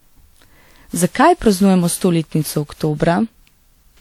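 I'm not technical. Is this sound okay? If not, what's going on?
No. Throughout, the speech sounds swirly, hollow and smeared: generation loss, likely from about seven rounds of compressed re-saving, murkier than one save gives.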